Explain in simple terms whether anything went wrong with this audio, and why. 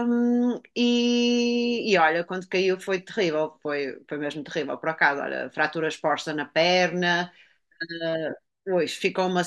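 Listening through the speech, nothing stood out as having gone wrong at any point.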